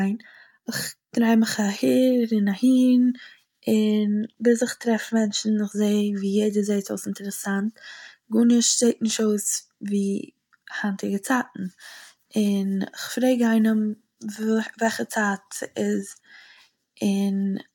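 Speech recording; no technical faults detected anywhere in the clip.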